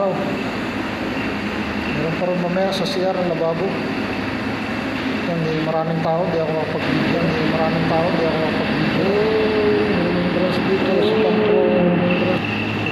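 A doubled audio track runs from 6.82 s to 12.38 s: a second full-band copy of the sound trails about two seconds behind, roughly as loud as the original, with no decay or room colour, cutting in and out abruptly. Likely, a slower capture path recorded the signal twice.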